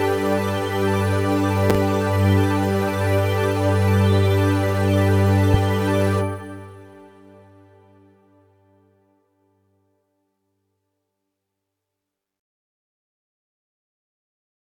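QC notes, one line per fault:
1.70–1.78 s, loud pop: a voltage pulse, likely from a plug, switch or static discharge, enters the chain, giving two sharp pops about 15 dB above the audio, which continues underneath.
5.54–5.57 s, loud pop: a single voltage step, likely a driver glitch or static, is shaped by the following circuits into one brief thump about 10 dB above the audio.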